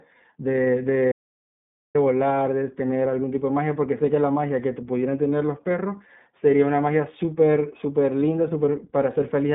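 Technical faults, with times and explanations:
Throughout, iLBC codec: the speech sounds narrow and slightly rough and synthetic, with plainly audible coding damage and nothing above 3.8 kHz. Each 20 ms frame's excitation is coded on its own, which fits a 15.2 kbps narrowband mode with a 150 Hz to 3.6 kHz line band.
1.12 to 1.95 s, audio dropout to silence: the speech cuts off mid-flow into silence with no room tone for about 0.83 s, then resumes abruptly. Whatever was said there is lost. The likely cause is a brief loss of input while silence kept being written.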